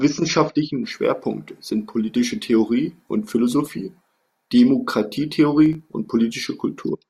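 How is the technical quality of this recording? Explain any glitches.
One glitch is audible. From 5.66 to 5.82 s, processor overload crackle: several sub-millisecond buffers miss their deadlines and are skipped, leaving hard-edged gaps heard as brief gritty tearing over the speech.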